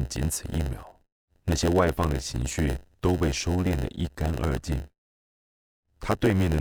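A block size mismatch with zero padding runs through the whole speech clip. One stage hands over blocks that are shorter than the next stage expects. The missing part of each block is filled with silence. That tiny gap repeats about 92 times a second, so a steady buzz sits under the speech. The gaps also stretch the timing. The speech plays at about 0.92 times normal speed, yet the pitch stays close to normal.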